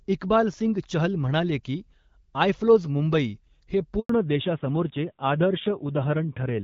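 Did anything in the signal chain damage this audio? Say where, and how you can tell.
Yes. At the network stage, a handover gap after "मुंबई हे" silences the sound from 3.99 to 4.09 s. The waveform goes flat for 100 ms while no frames arrive.

At the codec stage, a fallback to narrowband from 4.09 s makes the sound duller. On the spectrogram, energy above 4 kHz disappears, which fits a switch from wideband AMR-WB to narrowband AMR-NB.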